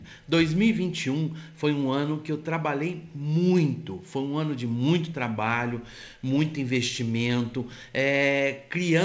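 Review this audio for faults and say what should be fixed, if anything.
Nothing stood out on listening, so there is nothing here that needs fixing.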